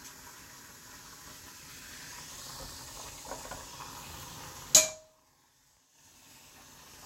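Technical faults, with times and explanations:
Nothing technical stands out here; the sounds in this clip come across without any faults to point to.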